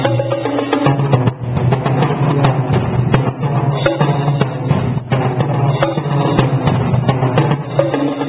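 No technical faults can be heard anywhere in this audio.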